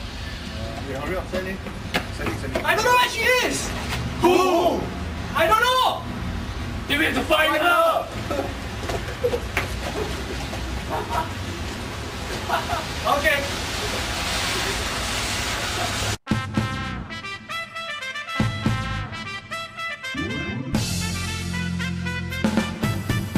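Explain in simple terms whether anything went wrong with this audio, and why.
Nothing went wrong here: the recording comes through without any technical problem, with no break, glitch or distortion anywhere in it.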